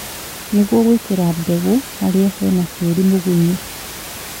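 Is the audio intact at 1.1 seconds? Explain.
Yes, the audio is intact at 1.1 seconds, with only the room's own background noise sitting well below the speech.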